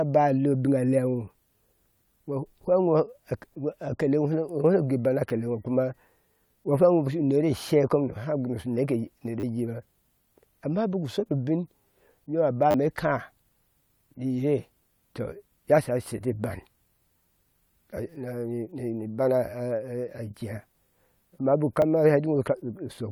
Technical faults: repeated buffer

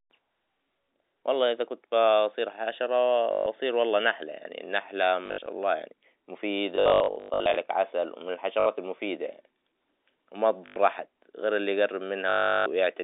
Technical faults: packet loss with last packet repeated

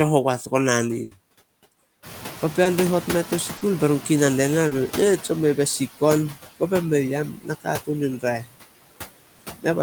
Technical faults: noise suppressor artifacts; burst of packet loss; noise suppressor catching up; short concealed packet loss; speech cut by the noise suppressor

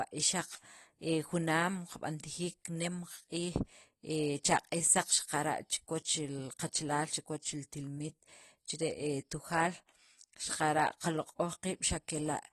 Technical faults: AAC compression

